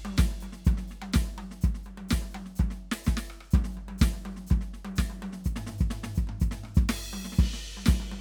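Nothing goes wrong in this stretch of music; there's no technical fault to point to anywhere in it.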